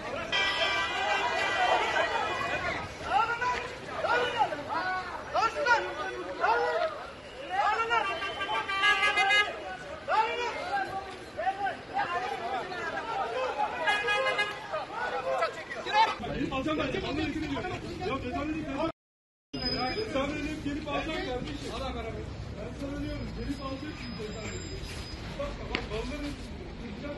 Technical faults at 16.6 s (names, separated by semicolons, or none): time-stretched section